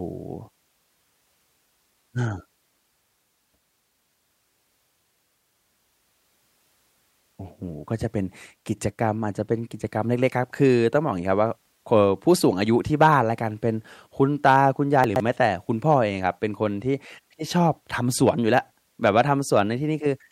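At 15.04 to 15.2 s, chunks out of order: a 40 ms chunk arrived three chunks late, so it plays after the audio meant to follow it. This gives a brief jumbled stutter, seen as three vertical broadband lines and abrupt waveform discontinuities at the joins.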